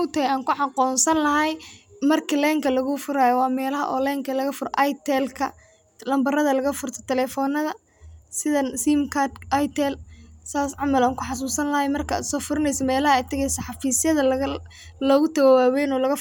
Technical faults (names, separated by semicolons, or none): none